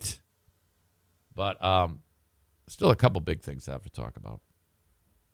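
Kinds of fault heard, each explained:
Nothing stood out on listening to this speech.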